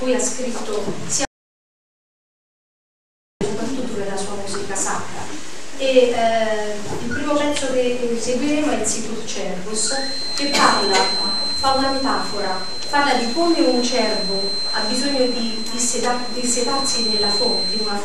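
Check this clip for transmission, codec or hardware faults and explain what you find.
One fault stands out: an audio dropout to silence from 1.25 s to 3.41 s, removing about 2.16 s of material. The sound cuts off abruptly mid-flow and resumes just as suddenly. The gap is silent with no room tone left, which points to the input likely being lost briefly while the recorder kept writing silence. Whatever occurred during those two seconds is gone entirely.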